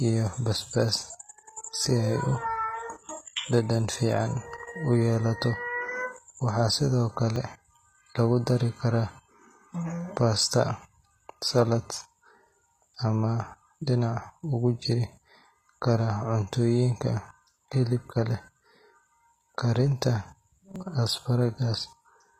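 The whole clip carries a gritty, metallic top end, likely from HE-AAC compression at a low bitrate, something like 20 kbps. The treble is rebuilt from copied lower bands rather than coded directly, so s sounds go lispy and harsh.

At 7.36 s the speech jumps forward, likely a dropped buffer (overrun). A few milliseconds of audio were overwritten before being read, and the two sides got spliced straight together. The same skip happens again at 20.76 s.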